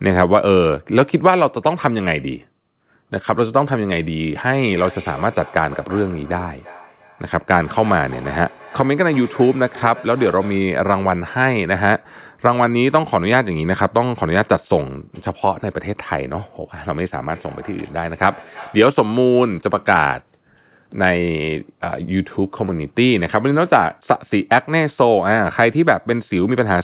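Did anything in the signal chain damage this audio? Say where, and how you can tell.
Yes. Call processing introduced feedback echo between two devices. From 4.63 to 10.83 s and 17.28 to 18.98 s, the speech returns roughly every third of a second, thinner each pass, peaking about 20 and 22 dB below the speech. Another device replays the call into a microphone whose echo canceller cannot remove it.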